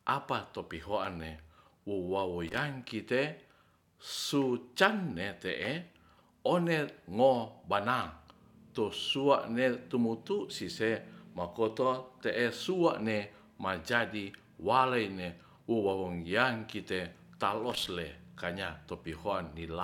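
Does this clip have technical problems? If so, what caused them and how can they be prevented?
Yes. Brief bursts of scratchy crackle break through the speech at 2.48 to 2.58 s and 17.7 to 17.87 s. This is loose connector crackle: a worn or dirty contact repeatedly makes and breaks, chopping the signal. Cleaning or replacing worn plugs and jacks, and securing cables against movement, prevents it.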